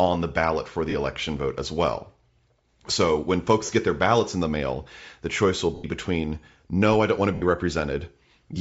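Speech runs throughout with a breathy, grainy edge, most likely from Bluetooth LC3 compression. The upper band sounds thinned and partly replaced by noise, damage consistent with a 10 ms transform frame at a low rate around 32 kbps. This is not wideband hiss: the grain sits only on the upper spectrum and follows the speech in time, rather than lying as a steady noise floor beneath it. Lost LE Audio frames cause four brief breaks. The first runs from 0.90 to 0.94 s (40 ms). The second runs from 3.66 to 3.69 s (30 ms), between "when folks" and "get their ballots in". The third runs from 5.75 to 5.86 s (90 ms), between "mail the choice will" and "between no I don't". The fourth runs from 7.34 to 7.43 s (80 ms), just after "I don't want to". Each gap matches a whole number of 10 ms frames. Instead of a hard dropout or click, the decoder repeats the last spectrum with scrambled phase, so each break is a short noisy smear. 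The longer two sag toward silence as the concealment fades out.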